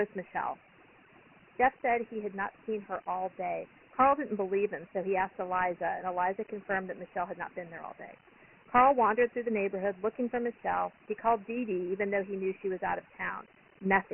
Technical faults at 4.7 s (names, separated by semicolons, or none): overdone noise removal; Dialogic VOX ADPCM